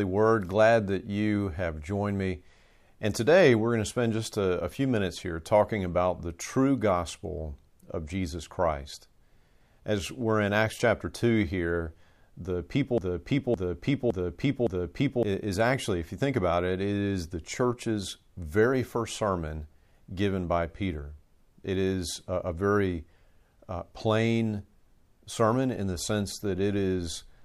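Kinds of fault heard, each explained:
Broken-record loop: a 0.56 s fragment of the speech repeats exactly four times back to back from 12.98 to 15.23 s, likely a stalled player or stream.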